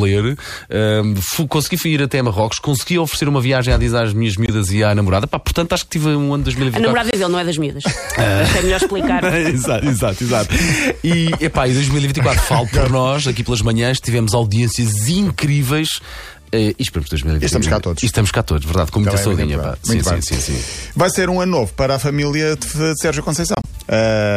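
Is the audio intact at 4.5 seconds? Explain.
No, there's a corrupt frame muted from 4.46 to 4.50 s: damaged compressed data got rejected and replaced with silence, an abrupt hole of about two frames.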